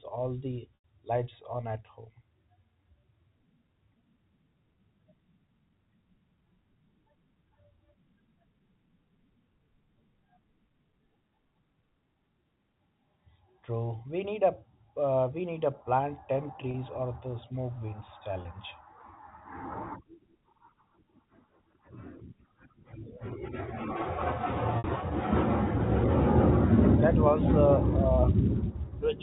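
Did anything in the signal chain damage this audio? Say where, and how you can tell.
Yes, packet loss with pitch repetition at the network stage: 0.75 s after "all the", 16.71 s after "need a plant ten", 18.42 s after "or the smoke winds", and 24.78 s. The receiver filled each 30 to 90 ms gap by repeating the last pitch period, heard as a brief buzzy hold, with the longer gaps fading into silence. A spectrogram shows frozen harmonic stripes, and the waveform shows identical cycles fading out.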